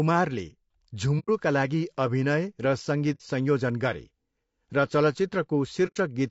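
Throughout, the speech sounds rough and grainy, with noise between harmonics, likely low-delay AAC compression (AAC-ELD) at a low rate, around 32 kbps. Soft-edged silent holes at 1.19–1.29 s, 3.14–3.21 s and 5.87–5.97 s show AAC frame loss with muting. The decoder zeroed roughly 90, 60 and 90 ms of spectrum, fading out and back.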